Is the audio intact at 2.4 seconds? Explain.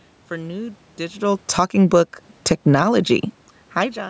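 No, at 2.4 s the automatic gain is falling: after "for new digital", from 1.43 to 2.85 s, the control lowers its gain about 7 dB, sinking speech and background together.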